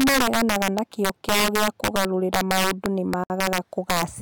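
Integer overflow runs through the whole speech clip. The signal is driven about 7 dB past full scale. A few percent of samples wrap to the opposite sign instead of being held at the limit. Loud peaks crack violently, much harsher than clipping.

At 3.24 s, right after "gĩa kũgarũrĩra maũndũ nĩ", a gap at a join of encoded pieces opens. Separately encoded sections were joined with their start delay and end padding left in. Sound drops out for 62.5 ms, edges smeared, then resumes at 3.30 s.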